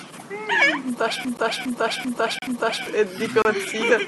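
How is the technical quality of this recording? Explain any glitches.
The recording has two faults: a repeating stutter and a series of short dropouts.

From 1.25 to 2.86 s, a broken-record loop replays one 0.39 s fragment four times back to back. The likely cause is a stalled player or stream resending its last buffer, which loses the audio meant for that span.

Gaps between stream segments cut in at 1.37 s, 2.39 to 2.42 s and 3.42 to 3.45 s, lasting about 14, 34 and 30 ms. These are hard-edged silences spaced one second apart, where mismatched segment timestamps leave holes that the player fills with silence.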